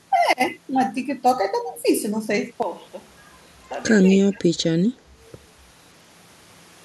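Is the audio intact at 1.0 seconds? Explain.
Yes, the speech at 1.0 seconds is intact, with no dropout, click, distortion or other fault at that moment.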